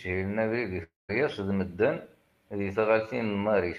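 A speech clip in which incoming audio most likely stopped reaching the receiver for about a quarter of a second, a long network dropout running from 0.83 to 1.11 s. Right after "abrid i" the receiver carries the last sound on as a fading buzz, which gives way to about 180 ms of near silence. The audio picks up again at "d medden", with roughly 260 ms of speech gone for good rather than delayed.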